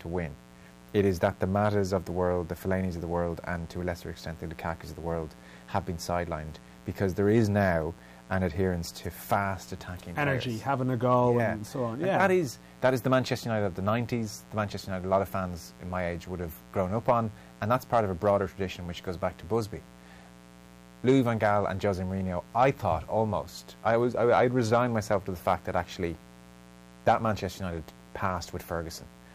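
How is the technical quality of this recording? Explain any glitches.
A steady, raspy buzz sits under the speech for the whole recording, roughly 25 dB below it: mains buzz. Sharp switching spikes from a dimmer, rectifier or unshielded line arrive twice per 60 Hz cycle, so harmonics stack up into the kilohertz range.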